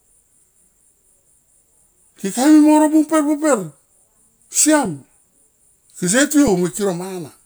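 A speech clip with two brief underruns with held sample, at 4.85 s and 6.48 s. Each time the waveform freezes flat at its last value for about 1.45 ms, a stall of 64 samples, then resumes exactly where it stopped with nothing skipped, so each event ends softly, with little or no click. A dropout to zero would instead snap the signal to silence and leave sharper clicks at both edges.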